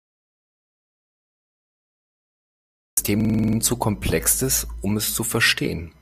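The clip opens in an audio dropout to silence that is already under way and lasts until 2.97 s. There is no room tone at all, only silence, which shows on the waveform as a flat line and on a spectrogram as a blank, empty band across every frequency. The sudden start of speech after this stretch, shortly before "zu komplex ist um", suggests the input was likely disconnected or muted while recording continued.

From 3.20 to 3.58 s a system hang loop takes over. One 46.44 ms slice of speech repeats exactly eight times, which fits a 2048-sample buffer being replayed while the system stalled. At 21.5 Hz it sounds like a rough, rapid stutter. On the waveform the same shape repeats identically, and a spectrogram shows vertical seams at regular intervals. Little or no real audio seems to be lost before "zu komplex ist um" resumes.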